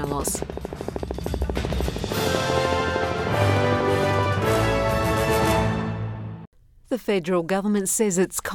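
A train of clicks runs from 0.04 to 4.27 s: about fifty near-identical ticks at a steady 13 per second, some 15 dB above the audio. Their regular pacing sets them apart from random crackle. Likely cause: nearby equipment interference.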